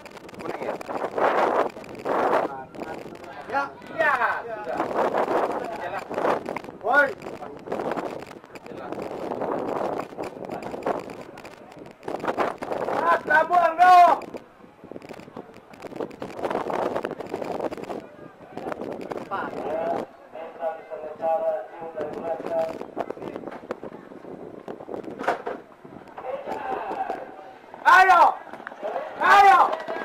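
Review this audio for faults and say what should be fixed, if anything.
Interference from nearby equipment or a struggling interface likely caused a train of clicks from 6.06 to 10.21 s: about forty evenly spaced pops at 9.2 per second, roughly level with the sound. To prevent it, route audio cables away from noisy equipment and secure the interface's connections and power before recording.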